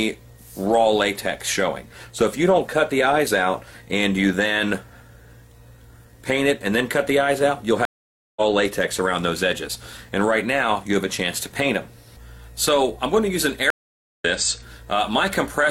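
At 7.85 s the sound drops out for about 0.51 s, returning at 8.41 s roughly a third of a second further on. At 13.70 s a similar 0.5 s gap ends at 14.25 s, skipping about half a second. Both are stream reconnects: the connection broke, playback went silent, and a fresh decoder picked up the live stream at a later point.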